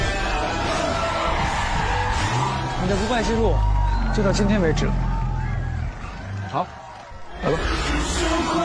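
Nothing in the recording stood out as a technical problem on listening.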